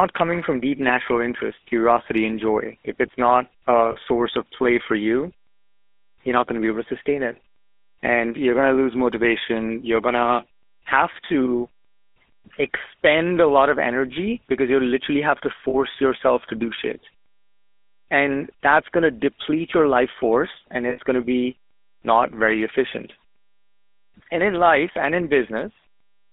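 Throughout, the GSM full-rate codec gives the speech a buzzy, gravelly roughness from its coarse pulse-driven excitation, which fits a 13 kbps stream. On a spectrogram, energy is confined to roughly 250 Hz to 3.6 kHz.

Lost GSM frames come at 3.92 s between "if it's not a" and "source of play for", at 15.7 s between "you literally have to" and "yourself to do shit", and at 20.9 s between "your life force and" and "going to be not". The first two each last 40 ms and the third 80 ms. In each gap the last good frame is repeated, giving a brief metallic ring. On a spectrogram this shows as a smeared, static band, and the waveform shows a short held stretch.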